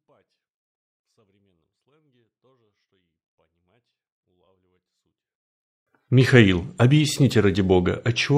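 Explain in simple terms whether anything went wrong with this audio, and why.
Something did go wrong, right at the start. From 0 to about 5.87 s the speech is nearly silent, though what little you can hear is perfectly clean, with no crackle or hiss. That's a 24-bit alignment error (too quiet). The audio was stored as 24-bit numbers sitting in the low part of a 32-bit slot, but something read them as full 32-bit numbers, so everything shrank to a tiny fraction of its real loudness at once.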